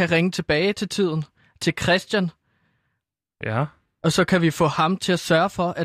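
Nothing goes wrong anywhere in this stretch of speech: there are no technical faults to report at any point.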